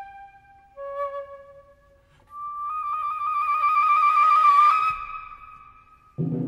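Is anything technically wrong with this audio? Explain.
No, nothing is technically wrong with this audio.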